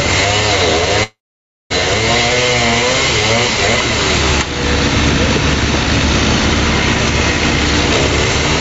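Right through the clip there's gain pumping, with the level swinging by roughly ten decibels. That points to the gain likely being set way too high for the microphone, so a fast limiter or compressor keeps clamping down on each loud sound. Loud and quiet moments end up squashed together.

Then from 1.03 s to 1.72 s there's a long network dropout. About 0.66 s of audio simply never arrived, likely lost in transit. The receiver tries to bridge the hole by stretching the last bit of sound into a fading buzz or hiss, but that runs out quickly, leaving roughly 0.56 s of dead silence. When the audio picks up again at 1.72 s, it carries on from further along, and the missing stretch is gone for good. The top end stops at 8 kHz, which fits the Opus call path.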